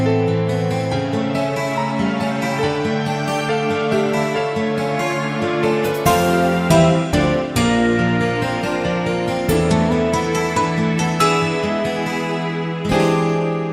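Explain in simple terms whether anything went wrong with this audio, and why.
Nothing went wrong with it.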